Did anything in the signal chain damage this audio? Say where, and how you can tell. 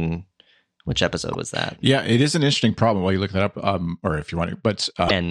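Yes. At 1.33 s, between "which episode" and "was that", there is a brief glitch, and a second, longer glitch runs from 5.06 to 5.11 s. Both are damaged data in a compressed stream, a codec or storage fault. Corrupted bytes made the decoder misread those frames and lose sync, so it garbled the output until it locked onto the next valid frame header.

From 2.38 s to the end, after "it is", the top end of the sound turns dull. This is channel delay (comb filtering), introduced at the driver or buffer stage, or wherever the channels are summed. One channel lags the other by only a couple of samples, a few hundredths of a millisecond. When the two are mixed to mono, shared content cancels at evenly spaced frequencies, with the first notch near 10 kHz.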